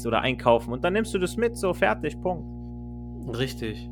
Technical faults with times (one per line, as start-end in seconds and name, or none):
0.00-3.92 mains hum